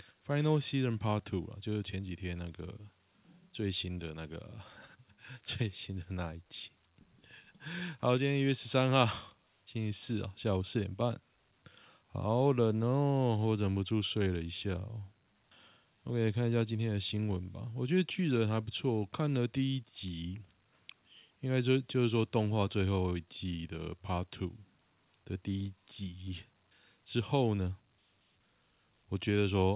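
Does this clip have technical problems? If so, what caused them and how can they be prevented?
No, no faults are audible.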